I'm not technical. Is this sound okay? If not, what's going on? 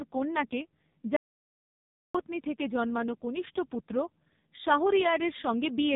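No, this speech has two problems.

The whole clip went through the AMR narrowband mobile codec, the speech compression used for 2G and 3G phone calls, squeezed very hard. Nothing above about 3.8 kHz gets through, so the voice sounds thin, as on an old phone line. Unlike a recording that is simply muffled, the voice also sounds buzzy and artificial, because the codec rebuilds the speech from a rough model of the voice instead of keeping the original sound.

There is also an audio dropout to silence from 1.16 to 2.15 s. The voice cuts off mid-flow for almost a second and comes back just before "থেকে জন্মানো কনিষ্ঠ পুত্র". The gap differs from a natural pause because it is completely dead, with no room sound or hiss at all. Whatever was said during that second is lost. The likely cause is a brief loss of the input signal, such as a connection drop.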